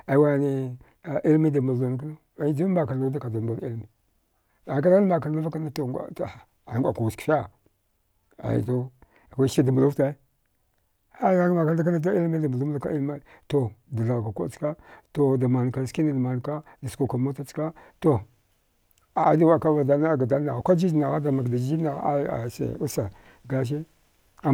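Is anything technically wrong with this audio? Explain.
No technical faults are audible.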